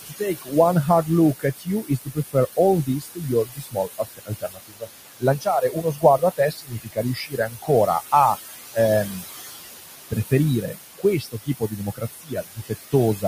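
Noise suppressor artifacts run through the whole clip. The suppressor pulls the room noise (about 9 dB under the speech) down by about 16 dB in the gaps and lets it rise under the voice. On a spectrogram the noise floor shows as patchy, blinking speckles that darken between phrases.

Speech cut by the noise suppressor begins at 0.02 s and lasts until 0.53 s. Roughly a third of a second of the opening speech is treated as noise and drops by up to about 21 dB, so the start sounds faint and swallowed. The waveform shows the envelope dipping sharply where it should hold.

The same fault returns from 1.39 s to 7.7 s, ending just before "a um". Here about 3 s in total is pulled down, by up to about 22 dB, so parts of the speech sound swallowed or faint. On the spectrogram the quiet speech energy is missing in scattered blocks.

A third stretch of speech cut by the noise suppressor runs from 9.84 s, just after "a um", to 13.24 s. 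About a second and a half is attenuated, by up to about 21 dB, so the closing speech sounds faint. The waveform shows gated-looking gaps in the quieter passages.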